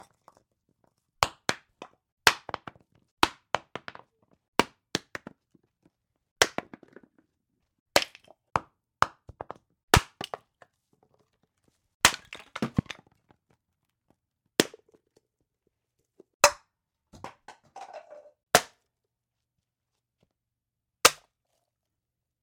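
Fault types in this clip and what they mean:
Loud pop: Two single sharp pops, at 9.97–9.99 s and 12.79–12.81 s, each about 25 ms long and peaking roughly 20 dB above the surrounding sound. The likely cause is a brief voltage pulse, such as from a switch, plug contact or static, added to the signal. What sets it apart from a dropout or a digital glitch is that the sound carries on underneath each pop without a gap, and each event is one thump rather than a buzz.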